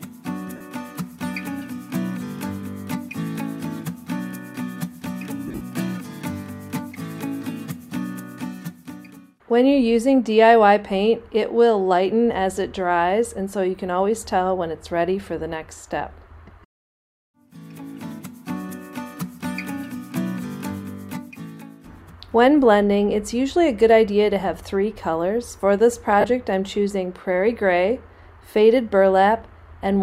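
At 0.56 to 0.61 s, 5.47 to 5.62 s and 26.21 to 26.24 s there are lost LE Audio frames. The LC3 decoder filled each gap by repeating the last spectrum with randomised signs, fading it after the first few frames, so tones smear into noise. The middle event scatters about 120 ms of loss over 135 ms, with the longest run around 70 ms. On a spectrogram each gap shows as a blurred, harmonic-free patch; on the waveform the envelope turns noisy. The lossy compression underneath is working normally.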